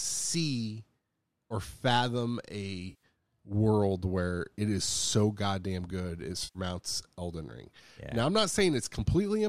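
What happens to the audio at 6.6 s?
Right after "so goddamn good it", from 6.44 to 6.59 s, there's AAC frame loss with concealment: about 110 ms of frames drop out, and the decoder patches the gap from the last good spectrum, leaving a smeared, noisy, phasey blur.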